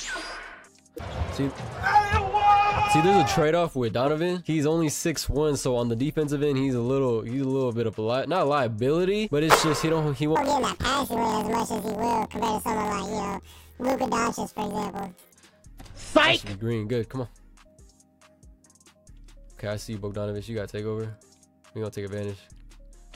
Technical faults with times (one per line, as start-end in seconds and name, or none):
10.36-15.34 planar audio read as interleaved